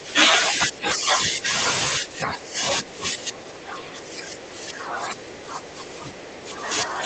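From the start to 1.52 s, again from 1.99 to 2.64 s, and from 2.81 s to the end, the speech sinks, thins out and breaks up in pieces, dropping by as much as about 15 dB. This pattern is speech suppressed in double talk, likely caused by the echo canceller on the call link failing to tell the near talker from loudspeaker echo while both sides spoke, and turning everything down. The Opus-coded call path limits the audio to about 8 kHz.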